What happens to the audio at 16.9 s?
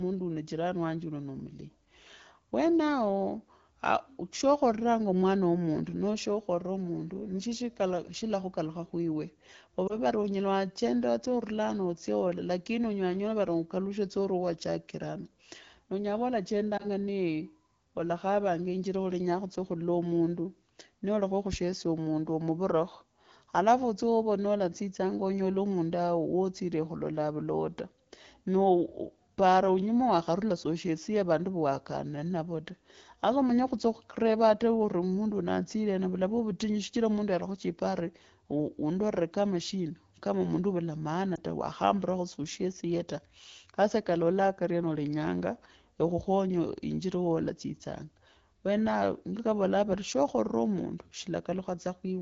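A lost AMR speech frame disturbs the audio from 16.77 to 16.86 s, between "onyela khuva" and "nee olakhavanga injira olenyaa". The gap points to a single 20 ms frame that failed its checksum. The AMR-WB decoder, running at about 12.65 kbit/s, filled it by reusing the previous frame's pitch and vocal tract settings at lowered gain. The result is a brief dip or warble, with the sound returning weak or rough for a moment.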